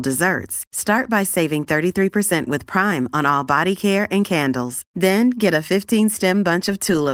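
Nothing's wrong with this short bit of speech; it's simply been carried through Opus voice compression at 24 kbps in its hybrid mode, and that's working as it should.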